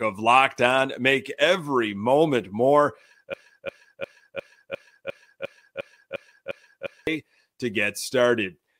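Right after "every moment more", at 3.34 s, a fragment of about 0.35 s starts repeating exactly, back to back, eleven times until 7.07 s: a broken-record loop. Playback or streaming likely stalled and resent its last buffered piece, so the intended audio there is lost.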